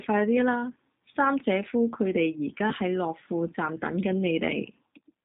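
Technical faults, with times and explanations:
Throughout, G.729 codec: the speech is rebuilt from a vocal tract model, pitch prediction and a few pulses per frame, so it sounds plainly rough and synthetic, not merely muffled as a simple low-pass would leave it, with nothing above 4 kHz, which fits an 8 kbit/s G.729A stream.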